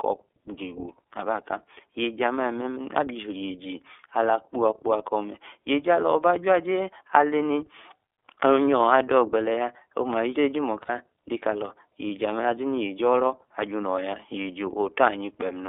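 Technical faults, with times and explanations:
Throughout: iLBC codec, narrowband with nothing above 4 kHz, giving plainly audible rough, synthetic speech; spectrogram shows energy cut sharply around 3.5 kHz, at about 13.3 kbps.
10.82–10.90 s: lost iLBC frames, about 60 ms concealed by repeating the last pitch cycle with noise, heard as a brief buzzy held vowel; waveform shows repeated periodic cycles, then clean recovery.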